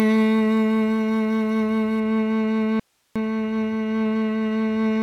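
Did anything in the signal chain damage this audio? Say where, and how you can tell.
Yes. Pre-emphasis left on, 0.0 to 2.0 s: the music sounds thin and bright, with treble about 8 dB above 1 kHz at 10 kHz. That fits the CD 50/15 µs curve whose matching de-emphasis was skipped at playback or conversion, so the boost stays uncorrected.

Audio dropout to a faint residue, 2.80 to 3.16 s: the music cuts off abruptly for 360 ms, leaving only hiss around 45 dB below it, then returns mid-flow. The hiss shows the path after the break stayed live, which points to a likely interruption in the analogue wiring feeding the converter.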